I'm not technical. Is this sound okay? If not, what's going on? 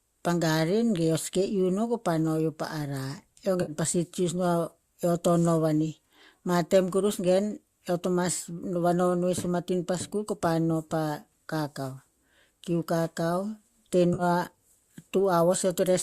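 No. There are two brief glitches, at 3.62 to 3.72 seconds and at 14.14 to 14.23 seconds. They last about six hundredths and five hundredths of a second. This is AAC frame loss with concealment. Small chunks of the compressed audio went missing, and the player patched each gap by guessing from the sound just before it. The patch sounds like a short smeared, fuzzy or hollow blip. The gaps fit a few lost frames of the low-delay AAC compression that was likely used here.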